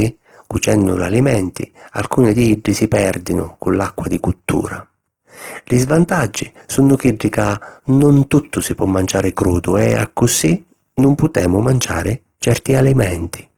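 Throughout, the speech sounds grainy and rough, likely from Opus compression near 16 kbps. The spectrogram shows noise-filled bands reaching 20.4 kHz.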